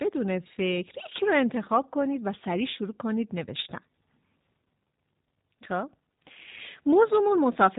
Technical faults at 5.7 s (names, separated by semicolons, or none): G.729 codec